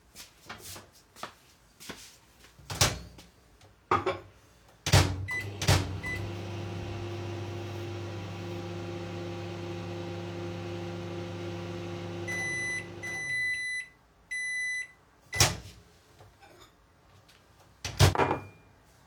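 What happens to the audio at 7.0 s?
At 7.0 s the audio is heard twice. A doubled audio track runs from 5.6 s to 13.6 s. A full-band copy trails the original by about 0.7 s, at roughly the same level. It has no decay or room colour, so it sounds like a clean repeat, not an echo. It starts and stops abruptly at those times. The likely cause is a second capture through a slower path, or an edit leaving two copies out of step.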